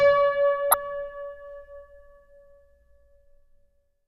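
A sharp, loud chirp-like burst at 0.71 to 0.74 s: a corrupt frame decoded, where flipped bits across a couple of compressed frames pushed energy into wrong frequencies.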